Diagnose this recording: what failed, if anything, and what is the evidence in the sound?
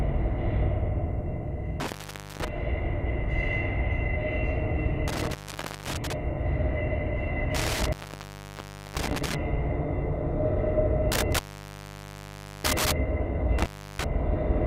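Intermittent contact in the analogue wiring: the sound cuts out at 1.80–2.48, 5.08–6.13, 7.55–9.35, 11.12–12.92 and 13.59–14.04 s, with opens of roughly 0.33 to 1.25 s. A loose plug breaks the circuit, so crackle marks each edge and faint hiss persists, unlike the clean digital silence of a network dropout.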